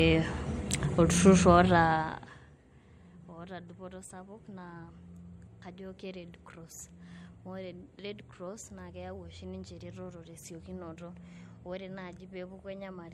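From the first second to the last, the speech has that swirly, hollow quality of generation loss, most likely from being run through MP3 a few times over at something like 64 kbit/s. Each pass re-quantises on a shifted frame grid, so the noise and spectral holes pile up, consonant attacks smear, and nothing survives above about 16.5 kHz.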